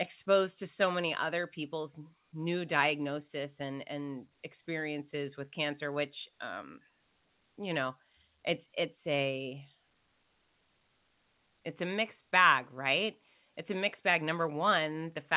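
No technical faults are audible.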